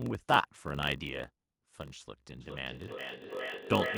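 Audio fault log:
throughout: block size mismatch (padded). There's a steady buzz at 46.9 Hz under everything, because each block arrives a little short and the leftover space is filled with silence. That inserts a tiny gap at the block rate, which fits one stage writing about 960 samples into a 1024-sample read. The padding also stretches the audio, so it plays at 0.938 times normal speed, a touch draggy, while the pitch stays about where it should be.
2.41 s to the end: feedback echo between two devices. From here the speech comes back round at a steady interval of roughly 0.4 s, each return thinner and more ringy than the last. Two devices on the same call are sharing the room, so one plays the other's microphone feed and that microphone hears it again. Neither echo canceller catches the other's playback, and the repeats peak at about -2 dB relative to the speech, almost as loud as the talker.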